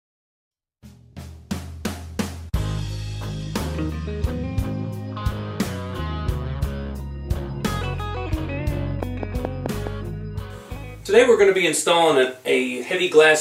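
A train of clicks runs from 9.03 to 9.88 s: about five near-identical pulses at a regular 4.8 per second, standing roughly 15 dB above the surrounding sound, likely from electrical interference or a faulty connection, heard as steady ticking over the audio.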